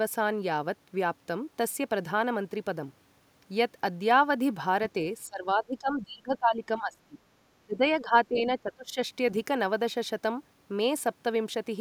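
From 5.26 to 7.18 s and 7.66 to 8.97 s, the speech drops by up to about 20 dB in broken patches, likely speech suppressed in double talk by an echo canceller. The waveform shows ragged dips, and the spectrogram thins and fades there.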